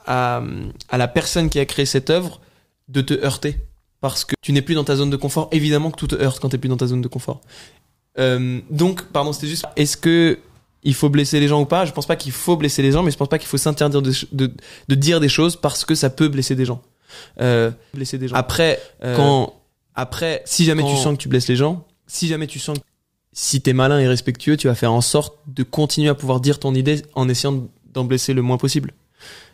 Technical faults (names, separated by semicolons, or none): damaged data in a compressed stream; doubled audio track